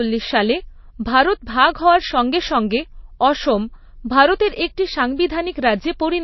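Throughout, the treble stops dead near 5.8 kHz and weak detail flickers watery and swirly, likely MP3 compression at a starved bitrate rather than simple low-pass filtering.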